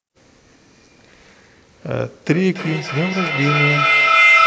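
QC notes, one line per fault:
2.32–4.46 s, feedback howl: a second device in the same room picks up this call's loudspeaker output and feeds it back into the microphone path, and the loop returns more level than it sends on each pass. Instead of decaying, the repeats pile up and narrow to a piercing tone near 2 kHz, pulsing about every 300 ms with the loop delay and peaking about 6 dB above the speech. It persists to the end of the clip.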